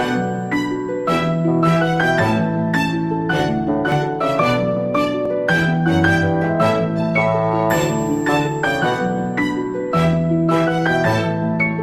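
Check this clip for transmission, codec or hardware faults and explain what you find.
Two brief skips point to a likely dropped buffer (overrun) at 3.92 s and 5.26 s: samples were overwritten before being read, so about 15 ms vanishes and the sound jumps.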